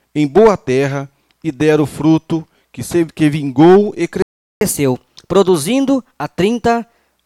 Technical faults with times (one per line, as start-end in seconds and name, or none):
4.22-4.61 playback stall
4.61-7.12 catch-up at higher speed